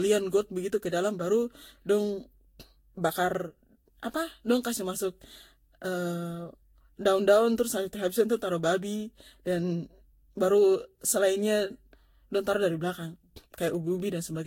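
Throughout the speech, the audio shows generation loss, most likely from being decoded and re-encoded around seven times through a lossy codec whose character points to Vorbis at roughly 62 kbit/s. Each pass requantised the signal on a shifted frame grid, so the noise and gaps stacked up. The result sounds swirly, hollow and smeared beyond what that bitrate alone would produce, consonant attacks are blurred, and nothing remains above about 16.6 kHz.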